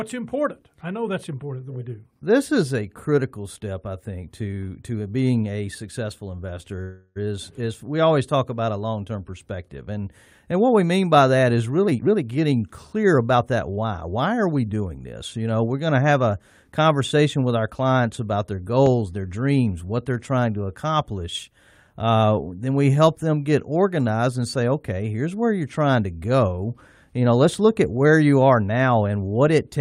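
At 6.81 s, just after "being a successful investor", packets were likely held up in transit and the jitter buffer ran dry: a call audio freeze. For about 0.34 s until 7.18 s, the last sound is stretched into a fading buzz, and then speech resumes where it stopped, now running later. Between 11.87 s and 14.09 s, from "mean by that is" to "are we doing this", an overfilled jitter buffer trims itself by cutting short pitch-period pieces. This jitter buffer speed-up plays the speech about 15% faster at unchanged pitch, removing roughly 0.3 s and making it sound hurried.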